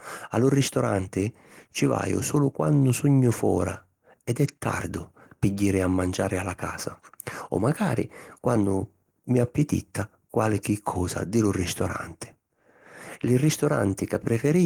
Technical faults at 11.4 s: none

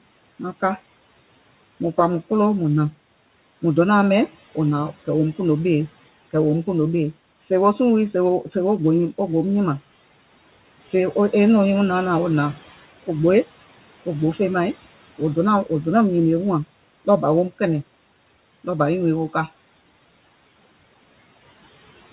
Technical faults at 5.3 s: noise suppressor artifacts

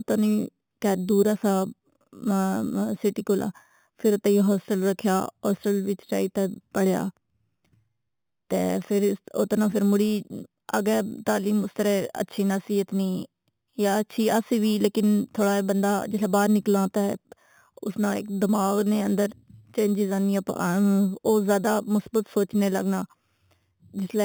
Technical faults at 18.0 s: imaging from sample-and-hold upsampling

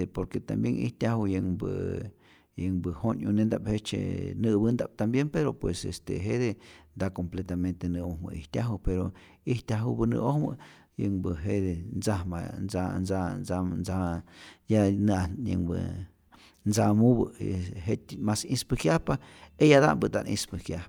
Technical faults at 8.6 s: none

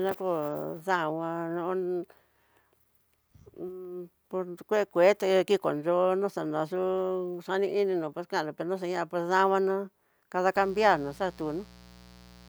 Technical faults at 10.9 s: mains buzz

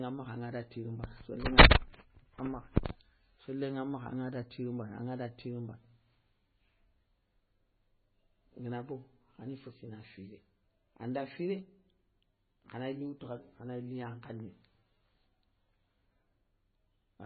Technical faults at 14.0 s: MP3 compression

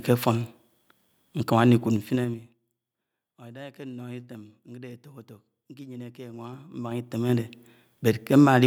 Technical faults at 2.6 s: zipper noise

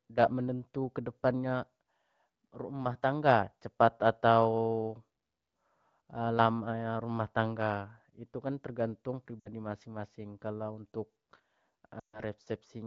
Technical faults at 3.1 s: none

